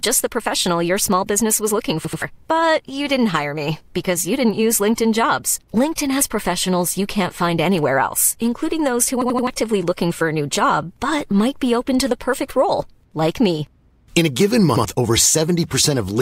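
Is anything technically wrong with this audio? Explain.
Yes, the speech stutters three times from a repeated buffer: the same chunk of roughly 85 ms plays again with hard joins, which fits a 4096-sample buffer. The device replays its last buffer when new audio arrives late, and the missing audio is lost.

At 2.05 to 2.22 s, just after "small business was looking", the chunk repeats twice more, dropping about 150 ms. At 9.22 to 9.47 s, between "else including those who" and "looking for a new", it plays three extra times, losing about 300 ms. At 14.76 to 14.85 s, after "a given", one extra repeat drops about 100 ms.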